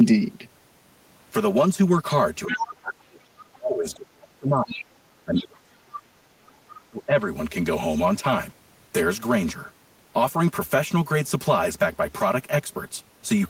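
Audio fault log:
Throughout: channel delay (comb filtering). The whole clip sounds hollow and phasey. One channel seems to arrive about 5 ms after the other before the two are summed to mono. Parts common to both then cancel at evenly spaced frequencies. The first notch sits near 100 Hz, and the rest repeat about every 200 Hz above it. These fixed gaps thin out the low body and colour the whole speech spectrum.
2.46–4.84 s, 5.25–6.44 s and 6.84–7.25 s: speech suppressed in double talk. In each stretch the talker's speech sinks. The deepest drops are about 30 dB, about 35 dB and about 25 dB. Roughly two seconds, one second and under half a second are affected. The likely cause is an echo canceller that cannot tell the talker from loudspeaker echo while both sides speak. It turns everything down, so the speech fades.
2.48–2.63 s, 4.71–4.83 s, 6.46–6.53 s and 6.70–6.81 s: other side's voice leaking through. 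Brief scraps of a second voice break in, each lasting only a fraction of a second. The first is strong, at about 5 dB below the speech. The others are at about 15, 35 and 25 dB below. This is likely the far side playing from a loudspeaker and being only partly removed from the microphone. The leftover scraps are short.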